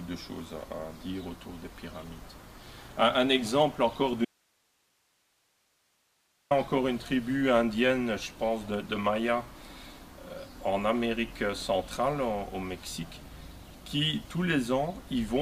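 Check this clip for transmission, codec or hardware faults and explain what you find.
One fault stands out: an audio dropout to a faint residue from 4.25 s to 6.51 s. The sound cuts off abruptly mid-flow and returns just as suddenly about 2.26 seconds later. The gap holds only hiss, sitting roughly 40 dB below the normal level. That pattern likely comes from the wanted signal being lost upstream while the path after the break stayed live, so its own noise floor kept passing through.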